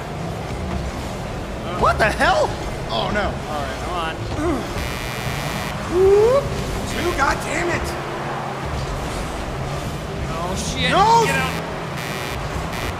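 From about 4.78 s right through to the end, there's computer activity noise riding under the sound. It's a buzzy, chirping texture pulsing at something like 100 times a second, and it isn't all that quiet, sitting maybe 15 dB below the wanted signal. What's going on is the machine's processor or graphics load shifting the shared ground of the audio circuit, so the interference tracks the computer's activity rather than anything in the sound itself.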